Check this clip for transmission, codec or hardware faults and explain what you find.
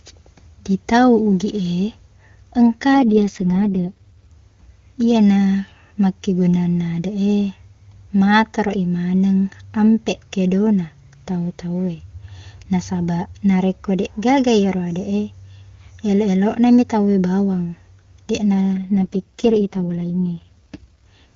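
Two AMR rate drops are audible. From 2.94 to 4.32 s, and again from 18.74 to 20.93 s just after "mi tauwe bawang deqna", the speech turns rough and synthetic, which points to the AMR-WB link falling from 23.85 to 6.6 kbit/s under poor radio conditions. The spectrogram keeps the same 7 kHz band and the waveform shows no gap, but harmonic detail smears into noise.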